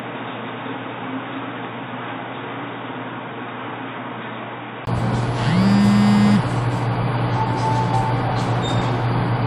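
A recording of everyday sounds opens dull and band-limited: from the start to 4.87 s nothing reaches above 3.8 kHz, the level sits about 10 dB lower, and a different background hiss lies roughly 45 dB under the signal. A 20 ms silence then marks the return to full bandwidth, the likely sign of an input switched to a poorer device rather than simple filtering, since tone, level and noise floor all change together. At 4.10 s, compressed frames skipped cause a jump of about two 21.3 ms frames, around 40 ms of audio lost. Unlike a dropout, the sound does not go silent. It leaps ahead.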